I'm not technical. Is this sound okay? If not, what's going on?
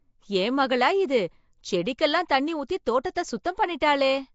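No. Throughout the clip the speech has a rough, hissy fuzz around it and a smeared, underwater quality, and the crisp top end is missing, with nothing above 7.7 kHz. This is likely Nellymoser compression, the old Flash microphone codec. It squeezes sound into small chunks with very little detail per chunk, so quiet parts of the sound get dropped and filled in with noise, which causes the hiss and blur.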